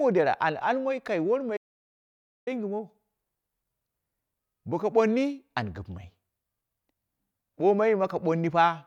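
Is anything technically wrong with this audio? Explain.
Yes. From 1.57 to 2.47 s, an audio dropout to silence: the input was likely lost while silence kept being written, so the speech cuts out into dead silence for 0.9 s.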